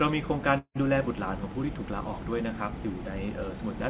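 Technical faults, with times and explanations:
0.58 to 0.77 s, call audio freeze: the sound stalls and is filled for about 174 ms by a fading continuation of the last sound that ends in about 80 ms of silence. It then resumes where it stopped with nothing lost, most likely because delayed packets left the jitter buffer empty, adding roughly 174 ms of delay on this 4 kHz band-limited call audio.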